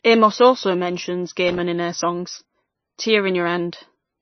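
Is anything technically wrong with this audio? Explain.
Yes. There are two problems.

Throughout the clip, the speech is band-limited, with nothing above about 6.1 kHz. The damage is plainly audible. The likely cause is MP3 compression at a bitrate low enough to fit roughly 23 kbps. Starved of bits, the encoder cuts the treble at a fixed point. It also drops quieter frequency lines, which flicker on and off between frames. That gives the voice a watery, swirling quality. Sibilants sound metallic, and consonant onsets smear.

From 1.48 s to 1.60 s there is loose connector crackle. A worn or dirty contact is making and breaking as it shifts. Each break chops the signal, and any DC on the line adds pops. The result is a short, irregular burst of scratchy crackle lasting about 0.12 s.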